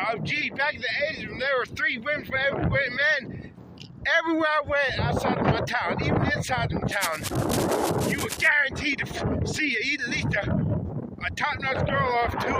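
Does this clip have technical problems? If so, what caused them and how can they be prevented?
Yes. From 6.92 to 8.48 s there is cable scratch noise, likely from a worn cable or connector being moved so that its contact resistance jumped around rapidly. That adds dense, irregular bursts of crackle, roughly 10 dB below the sound, heard as scratching and rustling over it. Replacing worn leads and connectors and keeping cables still while recording prevents it.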